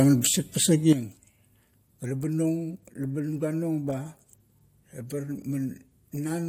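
Speech with a sudden gain jump at 0.93 s: level and background noise drop together by about 10 dB to the end, likely an unramped digital gain change. The waveform envelope steps down abruptly, and the spectrogram darkens across all frequencies at once.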